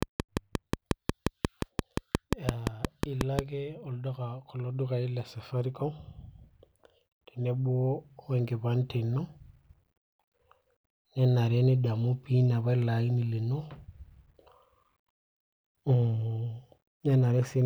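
From 0.03 to 3.40 s a regular train of clicks, about 5.65 per second and some twenty in all, ticks over the speech and its pauses, peaking well above it. It is likely interference or a faulty connection or power supply. The waveform shows evenly spaced sharp spikes, and the spectrogram shows thin vertical broadband lines.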